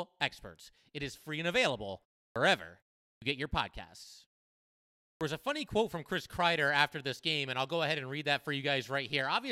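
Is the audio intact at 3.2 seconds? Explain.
No. A clipped start after a pause runs from 3.12 to 3.22 s. After a 0.38 s silence, the output device had idled and needed time to wake, so the first 98 ms of sound are swallowed and speech bursts in abruptly, missing its onset.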